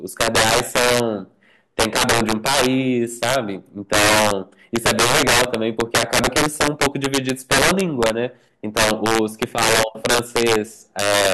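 Right from the start and all the way through, this speech has integer overflow. Something in the chain pushed the level about 9 dB too hot, and instead of being held at the ceiling, the loudest peaks wrapped around to the opposite extreme. Only a few percent of samples go over, but each one snaps across the full range, so you get harsh, violent cracks on the louder syllables, much nastier and sharper than ordinary clipping.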